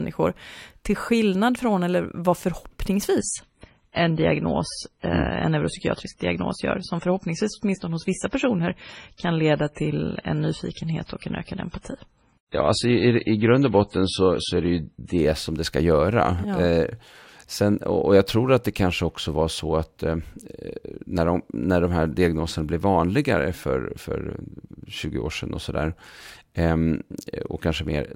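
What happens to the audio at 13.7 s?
At 13.7 s the audio is in the middle of an adaptive stream at a lower bitrate, a stretch running from 3.18 s to 15.18 s. The player switched down to a cheaper encoding when throughput fell, and the sound fits a step from around 128 kbit/s MP3 to about 24 kbit/s. Nothing survives above 10.6 kHz, so the speech sounds dull and swirly, and the quality change at each end is abrupt, with no gap.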